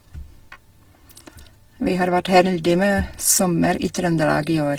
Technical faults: Opus compression

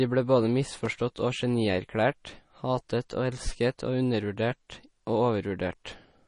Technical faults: MP3 compression; CD scratch ticks

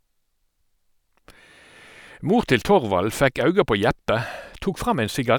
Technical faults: none

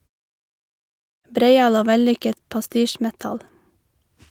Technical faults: none

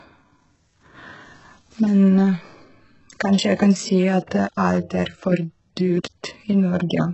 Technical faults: HE-AAC compression; pre-echo

